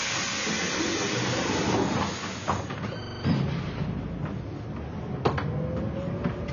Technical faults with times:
0.00-6.53 AAC compression
3.03-3.24 system hang loop

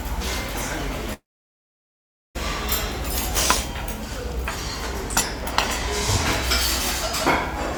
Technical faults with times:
1.13-2.37 long network dropout

